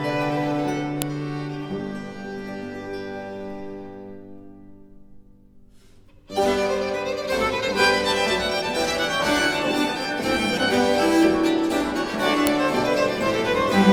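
Unstripped WAV headers, left in when pieces were joined, play as samples, so a file header played as audio snaps sharply at 1.02 s and 12.47 s.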